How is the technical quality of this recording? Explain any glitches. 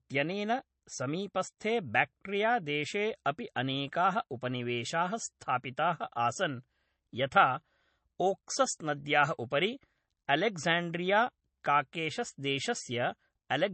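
The technical quality is limited by a single fault that runs through the whole recording: low-bitrate audio saved at a high bitrate. The speech has nothing above 8.3 kHz, so it sounds dull and swirly despite the large file. The likely cause is an MP3 made at a very low bitrate, around 32 kbit/s, later re-encoded at a high one; the second pass cannot restore what the first discarded. A spectrogram shows a flat ceiling at 8.3 kHz with empty space above.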